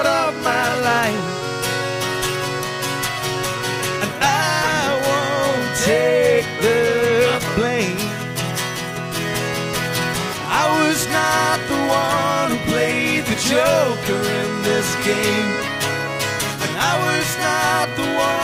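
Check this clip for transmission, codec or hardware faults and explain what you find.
No transmission, codec or hardware faults can be heard anywhere in the clip; the signal stays continuous and stable throughout.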